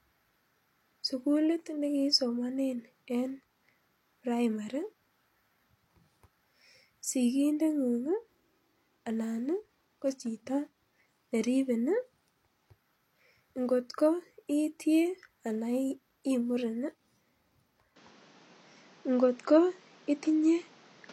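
At 17.96 s the sound changes abruptly and stays changed until the end at 21.12 s. It narrows to nothing above 7.5 kHz, takes on a duller, boxier tone, shifts in level by about 5 dB, and carries a new noise floor roughly 30 dB below the speech. There is no silent gap at the transition. This is likely an input switched to a poorer device mid-recording, another microphone or a headset's call profile with its own bandwidth, gain and noise.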